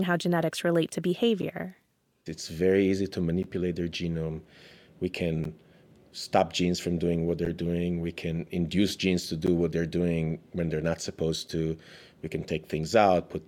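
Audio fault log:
1.42, 3.43, 5.44, 7.45, 9.47 and 11.48 s, gap between chunks: the speech briefly drops out in short, hard-edged holes every 2.0 s, each about 12 ms long, for example right after "how genetics relate to", between "very easy to" and "their genome", and after "when they're not supposed". No sound is lost. Silence is simply left at each join between 2-second chunks, a sliver of it before the next chunk starts.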